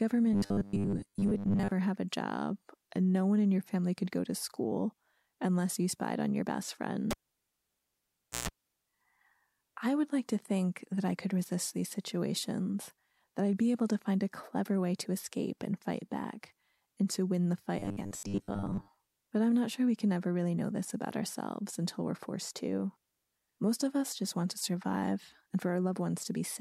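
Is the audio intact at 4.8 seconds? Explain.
Yes, the audio at 4.8 seconds is intact, with no fault at that moment.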